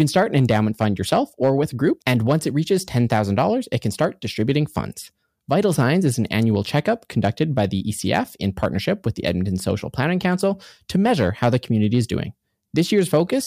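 Hard clipping runs through the whole speech clip: driven about 5 dB past full scale, roughly one sample in two hundred is flattened, leaving squared-off waveform peaks and crackle on peaks with high-frequency harmonic smears on the spectrogram.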